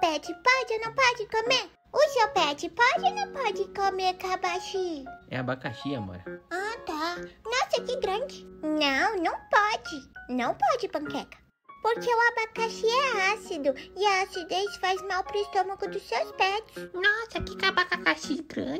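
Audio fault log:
Nothing to log here, the audio holds together with nothing that catches the ear.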